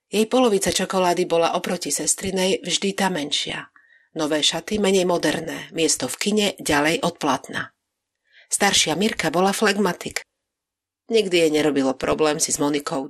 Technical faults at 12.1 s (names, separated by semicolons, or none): MP2 compression; DAB burbling